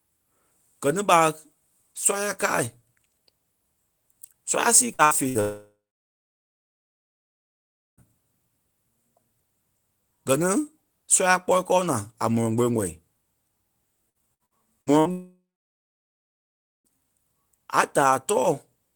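Speech, and the network path is in rough shape here. It starts with three short bursts of packet loss at 4.93, 5.05 and 5.29 s, each around 60 ms of missing audio. In each one the receiver stretches the last bit of sound into a brief fading buzz or hiss, then jumps ahead, so you get three quick stutters with small chunks gone. Right after, at 5.41 s, comes a long network dropout running to 8.01 s. The concealment carries the last sound for a moment, then it sits in silence for about 2.2 s. Roughly 2.6 s of speech never gets played, and the talk picks up further on. That's likely a stretch where no packets arrived at all. From 14.10 to 15.08 s there's repeated packet loss with the robotic sound you'd expect: six separate holes, the longest 58 ms, together about 0.3 s missing. The receiver patches each one by extending what came before, and since about 28% of that span is patched, the speech turns choppy. 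It runs straight into a second long network dropout from 15.11 to 17.00 s, where about 1.7 s is lost and roughly 1.4 s of that is plain silence after the fill fades out. Again that's most plausibly a full outage on the link before the audio comes back further on.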